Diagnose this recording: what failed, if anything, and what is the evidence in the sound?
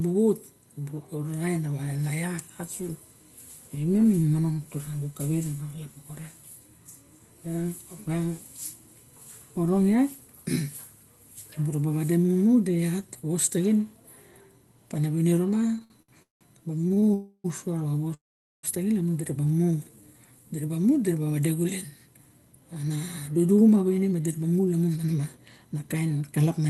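A thin, fixed-pitch whine sits under the whole recording, built on a 1 kHz tone with its strongest component up at 14 kHz, roughly 45 dB below the speech. This is USB whine, a fault in the analogue wiring and power stage. The bus draws current in regular 1 ms frames, and that pulsing leaks through the power or ground into the audio path as a tone at 1 kHz and its multiples.

From 15.67 to 16.43 s the speech drags and catches in seven separate hitches, the longest lasting 184 ms, with nearly half that span filled in. A lighter burst follows from 16.79 to 17.12 s, again seven hitches, none longer than 22 ms. These are repeated stalls (stutter) in the network and jitter-buffer stage. Packets kept arriving late, the buffer ran dry each time, and the receiver stretched the last sound until more audio came.

Two longer holds follow. From 17.14 to 17.46 s the last sound is carried on for about 0.3 s, ending in 60 ms of near-silence. 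From 18.14 to 18.65 s a hold of about half a second decays almost entirely to silence. The speech then resumes where it stopped, with nothing skipped. This is a call audio freeze, likely caused by a network delay that emptied the jitter buffer, so the receiver had to bridge the gap.

Between "dura ba" and "diraba mu", from 19.48 to 20.44 s, the speech slows to about 84% of normal speed while the pitch holds steady, and sounds become drawn out. This is a jitter buffer slow-down in the buffer stage. The receiver repeated single pitch periods and fragments of pauses many times in a row, adding about 166 ms of audio to rebuild its reserve after running low.

From 21.92 s to the end at about 26.66 s the speech runs at roughly 111% of normal speed with unchanged pitch and sounds hurried. This is a jitter buffer speed-up. The buffer had built up more audio than its target, so the receiver trimmed short pieces one or a few pitch periods long, over and over. 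Together they removed about half a second of audio to bring the delay back down.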